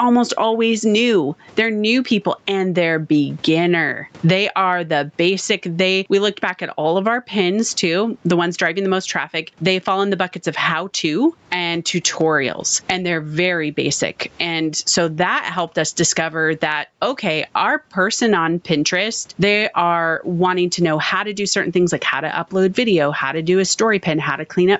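Gain pumping runs through the whole 25-second clip: the room noise sits about 44 dB under the speech, and the gain ducks by roughly 15 dB as each loud syllable arrives. The likely cause is input gain set far too high, with a fast limiter clamping down on every peak and squashing the speech's dynamics.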